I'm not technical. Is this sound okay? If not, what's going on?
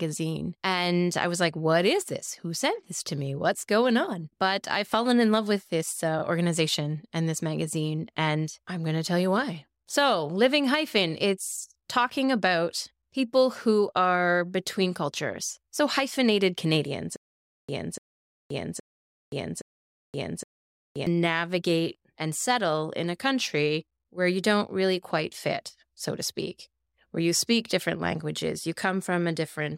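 No. From about 17.16 to 21.07 s the speech hits a stutter with silent gaps: a short 0.29 s snippet repeats four times, each followed by about half a second of dead silence. That's likely the playback or stream stalling and replaying its last bit, so whatever should have played there is gone.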